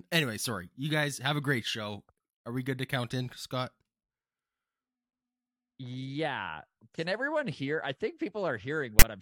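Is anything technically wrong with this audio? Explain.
Yes. From 8.99 to 9.02 s there is file tags played as audio: the player read a block of text metadata as sample data. Because text bytes sit in a narrow value range, the result is a loud, one-sided rasp, a hard-edged burst of static near the end of the speech.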